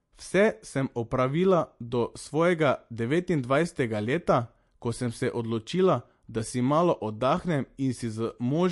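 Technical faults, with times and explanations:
Throughout, MP3 compression: the speech has nothing above about 11.3 kHz, and the codec damage is plainly audible, with a watery, swirly quality where weak frequency lines drop in and out between frames, and metallic chirps on the s sounds. That's likely the MP3 encoder running short of bits, which fits a low bitrate around 48 kbps, so it chops the treble at a fixed point and zeroes whatever its hearing model judges too quiet to matter.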